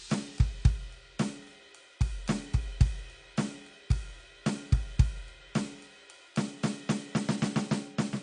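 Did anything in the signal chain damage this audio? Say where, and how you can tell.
Yes, at the codec stage. Across the whole music clip the sound is dull and smeared, with a warbling, fizzy texture on held tones and sibilants, and nothing at all above 10 kHz. That pattern points to AAC compression, likely AAC-LC at a low rate, which fits a bitrate of about 32 kbps. With so few bits per frame the encoder cuts the top band entirely and quantises the remaining spectrum coarsely, leaving gaps that shift from frame to frame and produce the warble.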